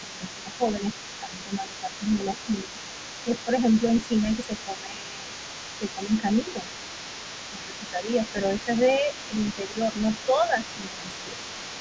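A second, fainter voice runs underneath from start to end, sitting roughly 15 dB below the speech: the other side's voice leaking through, likely because the echo canceller left some loudspeaker sound in the microphone. The speech itself dips by around 10 dB from 0.0 to 0.63 s, 1.19 to 2.66 s, 3.24 to 3.51 s, 4.24 to 6.7 s and 7.51 to 11.39 s. This is speech suppressed in double talk, likely the canceller turning down both voices when it couldn't separate them.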